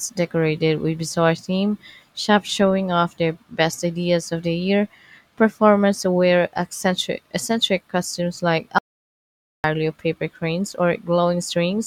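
A speech clip with one audio dropout to silence. After "eccentric eccentric costumes like", the sound cuts out at 8.79 s and returns at 9.64 s with "of paper cranes". The 0.86 s gap is silent, with no room tone. The likely cause is a lost input feed while recording continued.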